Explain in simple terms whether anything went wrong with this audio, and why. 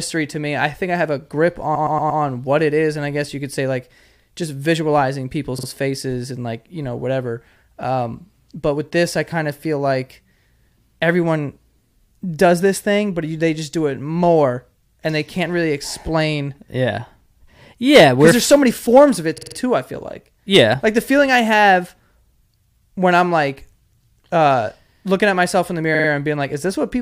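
The speech stutters in four places because of repeated frames: short chunks of the compressed audio were played again. At 1.74 to 2.21 s a 116 ms block repeats four times. Shorter 46 ms blocks repeat at 5.58 s (after "say like just visualizing", before "faces and like you"), at 19.37 s and at 25.94 s.

Hard clipping also occurs: loud moments were too big for the recording chain, so their peaks were chopped flat and sound harsh and crackly. This happens from 17.94 to 18.55 s, around 18.97 s just before "of it too I", and around 20.54 s after "too I feel like".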